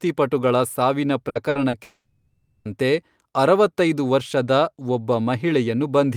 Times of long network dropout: 1.83-2.67

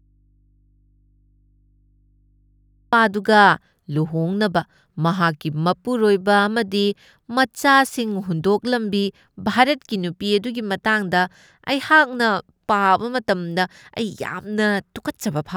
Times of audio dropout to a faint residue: 0.00-2.93

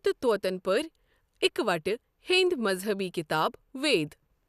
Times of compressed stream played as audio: none

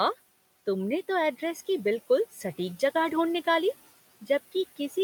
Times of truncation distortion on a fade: none

